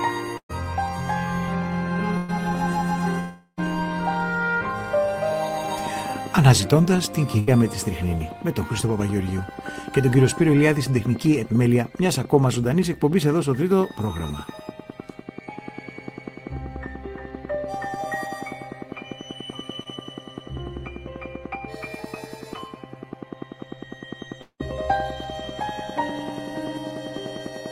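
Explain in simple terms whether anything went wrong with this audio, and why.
Several things went wrong. At 0.37–0.51 s, 2.17–2.30 s and 7.39–7.49 s, the sound briefly turns into a fading buzz or hiss, then jumps ahead. This is a burst of packet loss: roughly a tenth of a second of audio never arrived, and the player stretched the last sound to cover it.

At 3.20–3.59 s and 24.41–24.61 s, the sound fades into near-silence for up to four tenths of a second and returns with a piece missing. This is likely a long network dropout, where the connection briefly delivered nothing.

From 5.87 s to the end, a steady ticking runs about ten times per second, standing out above the sound even in pauses. This train of clicks likely comes from electrical interference or a faulty connection or power supply.

Around 19.83–19.87 s there is a tiny smear, from short concealed packet loss: a few hundredths of a second went missing and were smoothly patched over.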